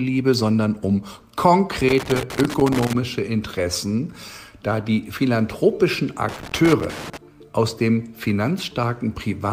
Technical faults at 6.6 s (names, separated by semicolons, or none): loose connector crackle